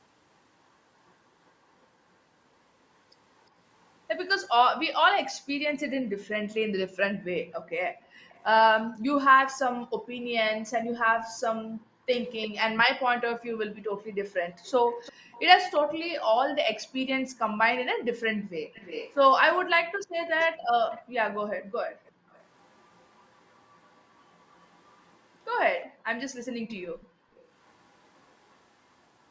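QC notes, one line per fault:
7.13–14.06 s, 17.93–18.49 s, 21.58–22.3 s, 25.89–27.35 s: background gated by the echo canceller. Room sound dips by up to about 38 dB while the far-end loudspeaker plays, then returns.
8.29–8.4 s: echo leak. A faint scrap of delayed sound, roughly 35 dB down, trails by 351 ms, likely residue the far end's echo canceller failed to remove.
12.24–28.58 s: echo leak. A delayed copy lags 351 ms behind, roughly 25 dB below the speech, likely loudspeaker pickup leaking past the echo canceller.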